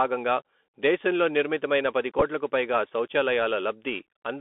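From start to end, the speech carries the Bluetooth CVSD headset codec. The band runs from 250 Hz to 3.5 kHz. Each sample is coded as one bit, up or down, which fits a 64 kbps link. S sounds turn scratchy, and a granular hiss sits under the voice.

At 2.19 to 2.22 s comes a Bluetooth headset packet repeated fault. Several packets were lost over about 30 ms, and the decoder replayed the previous packet's bits instead. The longest run lasts only a few milliseconds. It is heard as a short, rough buzzing tick.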